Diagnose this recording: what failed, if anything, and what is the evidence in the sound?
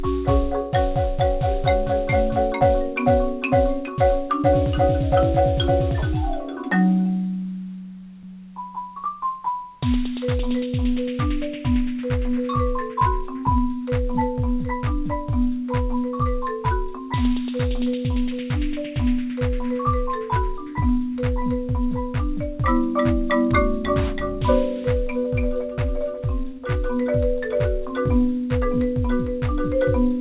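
Nothing failed: the signal arrives intact through the call path, with its content stopping at about 4 kHz, as expected of a narrowband telephone codec such as G.711 mu-law, and no stage shows any fault.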